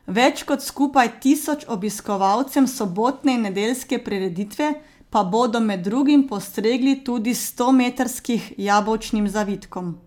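No technical faults are audible.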